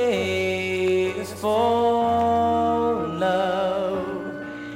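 No faults are present anywhere in the clip.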